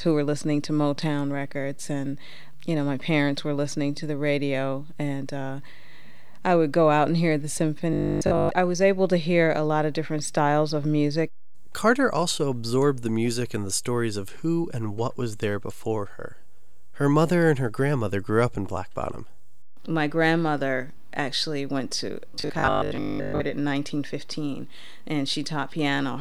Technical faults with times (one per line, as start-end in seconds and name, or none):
7.93-8.49 robotic sound from repeated short buffers
22.30-23.44 robotic sound from repeated short buffers